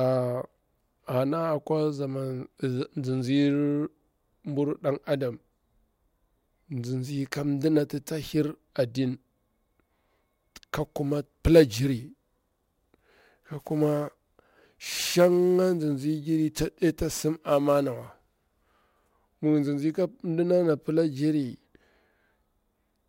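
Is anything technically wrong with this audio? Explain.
Yes. Sample clock jitter affects the speech from 10.81 s to 18.81 s. The converter's timing wanders by a few microseconds, so each sample is captured slightly early or late. Where the waveform changes quickly, that timing slip becomes an amplitude error, here roughly 25 dB below the signal. It sounds like a grainy hiss riding on the speech, strongest on loud and bright sounds such as sibilants and absent in the pauses.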